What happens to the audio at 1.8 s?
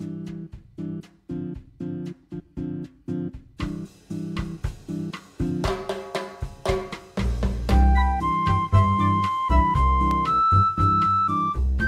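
Nothing goes wrong at 1.8 s; the audio plays through that moment intact, with no dropout, click or other fault.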